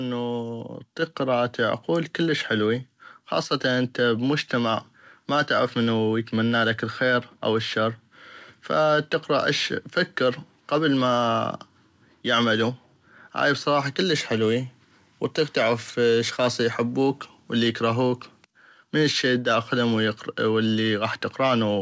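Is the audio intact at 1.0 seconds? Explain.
No. At 1.02 s the microphone volume steps up by about 4 dB. The call software raised the input level at once, so speech and background jump louder together.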